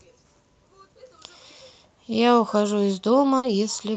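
A burst of packet loss hits from 3.37 to 3.46 s, in speech carried over an Opus call path limited to 8 kHz. The receiver stretches the last sound for 60 ms as a held, fading copy, then jumps ahead, so 60 ms of speech is simply missing.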